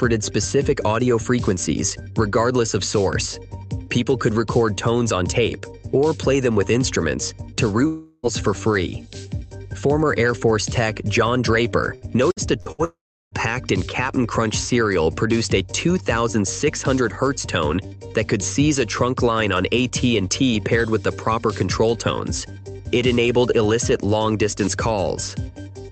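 The audio comes through a call codec that cuts off everything above 8 kHz, which fits Opus at around 32 kbps. From 7.87 to 8.26 s there is a long network dropout, likely from a stalled connection. About 360 ms of audio is missing. The receiver fills the whole hole by stretching the last sound into a fading buzz or hiss, so no true silence appears. The audio then resumes without the lost part. From 11.95 to 12.81 s there is repeated packet loss, giving a robotic sound. Four separate holes occur, the longest 65 ms. Each is patched by repeating the last sound, and the next follows quickly. About a quarter of this span is concealed, so it sounds choppy. A second long network dropout runs from 12.84 to 13.35 s. About 480 ms is lost. The concealment buzz or hiss fades out fast, leaving about 360 ms of silence before the audio returns.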